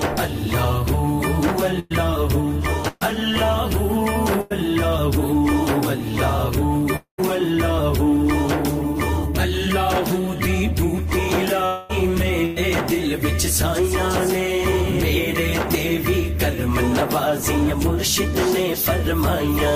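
Bursts of packet loss hit at 1.79, 2.88 and 4.41 s. Each gap runs about 0.1 to 0.12 s. The last sound is stretched into a short buzz or hiss that fades. Then the audio jumps ahead, skipping what was lost.

At 6.96 s comes a long network dropout, likely the cause of a gap lasting to 7.20 s. A fading fill gives way to roughly a tenth of a second of silence. A second one runs from 11.66 to 11.91 s, fading without full silence. About a quarter second of audio is lost each time.

Another packet-loss burst at 12.45 s skips about 0.1 s behind a brief fading buzz or hiss.

At 15.72 s a short concealed packet loss drops about 20 ms. The fill is a quick smear that blends back, heard as a tiny wobble.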